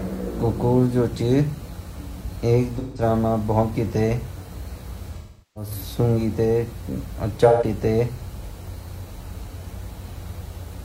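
AAC frame loss with concealment occurs at 2.78 to 3.02 s, 5.17 to 5.71 s and 7.47 to 7.64 s. Frames went missing. The decoder rebuilt them from the last good spectrum. Each patch sounds smeared, noisy or phasey. The middle gap is longest, about 0.38 s.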